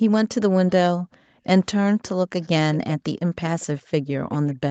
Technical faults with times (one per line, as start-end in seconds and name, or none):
0.99-1.45 background gated by the echo canceller
2.04-2.09 echo leak
2.42-2.48 echo leak
2.74-2.94 echo leak
3.60-3.82 echo leak
4.31-4.55 echo leak